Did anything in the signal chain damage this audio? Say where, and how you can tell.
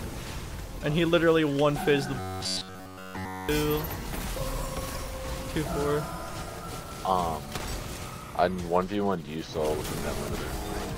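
Yes. Robotic sound from repeated short buffers, 2.20 to 3.49 s. A rigid 93.8 Hz buzz throughout. Likely driver buffer underruns repeating blocks of about 10.7 ms.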